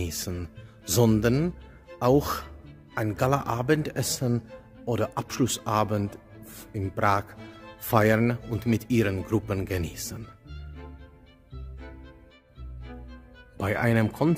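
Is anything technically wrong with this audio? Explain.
No, no technical faults detected.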